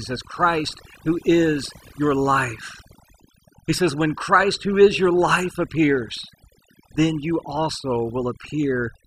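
From start to finish, the background falls away to near silence scattered with twinkling, glassy specks. That is overdone noise removal: a noise reduction stage set far too strong has pulled individual frequency bands down or out whenever they sat close to its noise estimate, and the quieter parts of the speech were cut away along with the noise.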